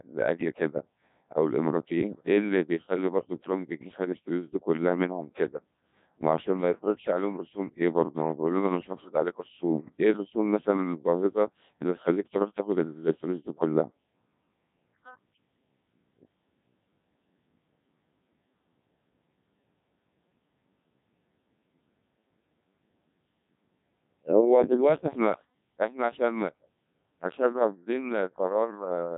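Throughout, the speech sounds robotic and buzzy, with nothing above 3.7 kHz. This is heavy Codec 2 vocoder damage, at a rate that fits 1.6 kbit/s. Only pitch, voicing, energy and a spectral envelope survive, and the decoder rebuilds the voice from sine waves.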